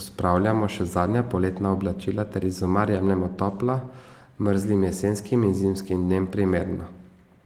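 No faults found in this speech clip; the Opus voice coding at 24 kbps in hybrid fullband mode leaves only light coding texture.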